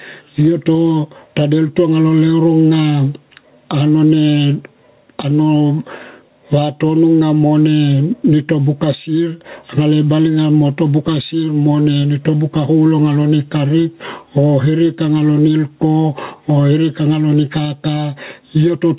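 Gain pumping runs through the whole clip: the level swings by around 10 dB, pulled down as soon as speech gets loud, so quiet and loud passages sit unnaturally close together. The likely cause is microphone gain set far too high, with a fast limiter clamping down on each loud sound. On the waveform, the envelope looks flattened. On the spectrogram, everything sits within a band that ends at 4 kHz, which points to a narrowband telephone codec.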